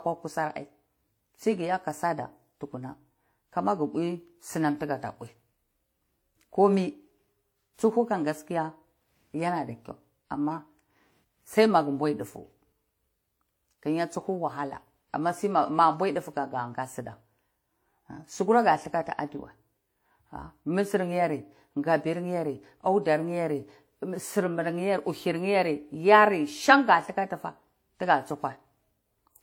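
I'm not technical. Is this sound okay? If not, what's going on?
No. Throughout the clip the speech has artefacts of different kinds layered together rather than one clean sound. This is transcoding between lossy codecs. The recording was likely squeezed by one space-saving format, WMA, and then squeezed again by another, HE-AAC. The second format spent effort reproducing the first one's flaws and added its own, so both sets of artefacts remain audible together.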